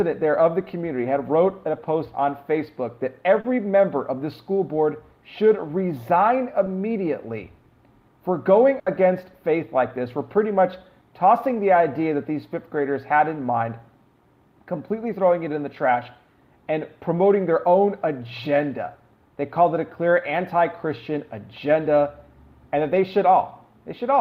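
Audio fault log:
3.40–3.45 s and 6.65 s, short concealed packet loss: about 40 ms and then about 10 ms of audio arrived too late to decode. The receiver covered each hole by extending the preceding sound, copying its pitch if tonal or shaping noise if not, then crossfaded back. The result is a brief smear or wobble rather than an audible gap. Unlike a burst, nothing fades away.
8.79–8.87 s, burst of packet loss: roughly 70 ms went missing in a row, too long for a seamless patch. The receiver kept extending the last sound but lowered its level as the gap lengthened, so a held buzz or fading hiss replaces the real audio. It then resumes further on with that stretch gone. The fade, the longer duration and the jump in the audio mark it apart from the short concealed losses.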